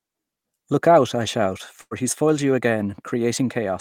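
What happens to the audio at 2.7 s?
The speech briefly runs hurried but keeps its normal pitch, about 6 percent fast, from 2.22 s to 2.71 s, so 2.7 s falls at the very end of that stretch. This is a jitter buffer speed-up. The receiver's buffer had built up more audio than it targets, so it trimmed short, pitch-period-sized pieces over and over to catch up, removing around 40 ms in total. That compresses timing without shifting the pitch.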